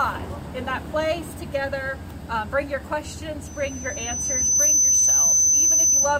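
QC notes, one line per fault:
3.46–6.20 s: loudspeaker feedback squeal, a 6.1 kHz tone swelling over about a second to roughly 10 dB above the audio as mic-speaker loop gain exceeds unity.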